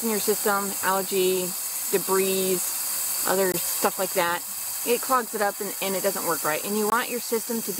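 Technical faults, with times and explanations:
3.52–3.54 s and 6.90–6.92 s, block of digital silence: twice the output buffer was apparently not filled in time, so a 20 ms stretch of samples went out as zeros. The sound drops straight to digital silence and returns with no fade on either side. At this length each gap is heard as a short, sharp hole.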